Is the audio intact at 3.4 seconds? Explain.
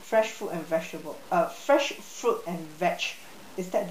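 No. At 3.4 seconds, as across the whole speech clip, there is low bit depth without dither. The grainy, gritty distortion suggests the signal was likely truncated to about 7 bits with no dither. The rounding error tracks the signal, sitting roughly 25 dB below it, so quiet passages crackle and sputter. On a waveform, low-level stretches show visible stair-steps; a spectrogram shows signal-dependent broadband grit that comes and goes with the speech rather than a steady noise floor.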